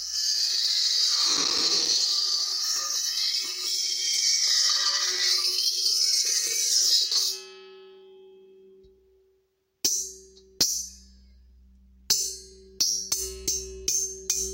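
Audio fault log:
1.37–1.93 s, processor overload crackle: a burst of gritty crackle tears across the sound for about half a second, then stops. The processor repeatedly missed its deadlines for short buffers, which fits buffers of about 5 ms. Around ten of them went out as brief hard-edged gaps of silence.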